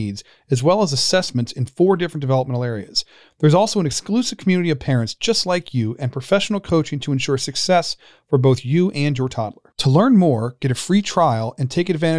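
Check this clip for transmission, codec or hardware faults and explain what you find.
Nothing in this speech recording points to a transmission, codec or hardware fault, so there's nothing here to flag.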